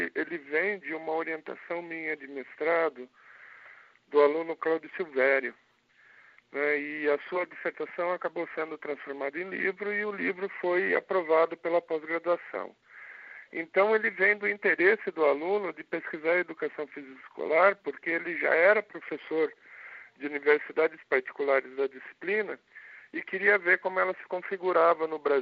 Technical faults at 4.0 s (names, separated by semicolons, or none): none